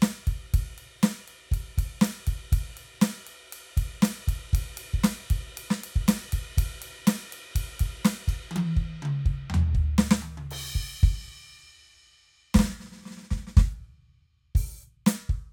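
No faults to report on the music in this clip.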